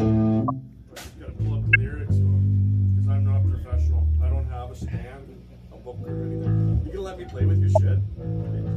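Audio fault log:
0.48–0.50 s, 1.73–1.76 s, 7.75–7.81 s: corrupt frame decoded. A couple of damaged frames each time misplace energy in frequency, giving brief blips, loudest at 1.73 s.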